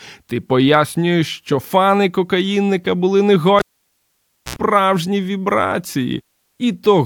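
At 3.59 s, after "що фани кокаїнника були", the cable is pulled and plugged in: a pop, 0.92 s of near silence, a 74 ms burst of 60 Hz mains buzz, another pop at 4.56 s. The waveform shows spikes around a flat gap. The spectrogram shows harmonic stripes before the return.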